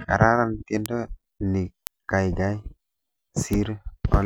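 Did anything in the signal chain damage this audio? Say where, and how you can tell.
Yes. Bit error spikes: single flipped bits in storage or on a digital link cause one-sample ticks of about -1 dBFS at 0.86 and 1.87 s, and about -7 dBFS at 3.53 s.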